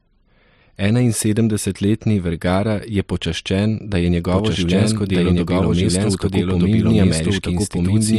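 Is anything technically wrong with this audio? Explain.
Yes. There is a doubled audio track from 4.32 s to the end. The speech is likely being captured a second time by a slower path, so a dry, full-band copy enters abruptly. It trails the original by roughly a second and a half at about equal loudness.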